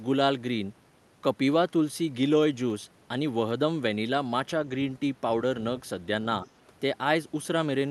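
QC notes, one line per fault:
6.45 to 6.50 s, other side's voice leaking through: a brief, faint scrap of a second voice sits underneath the speech for about 50 ms, roughly 30 dB below the talker. The likely cause is the far-end voice playing from the talker's loudspeaker and reaching the microphone, with the echo canceller leaving a short residue that then passed through the Opus call path's 12 kHz band limit.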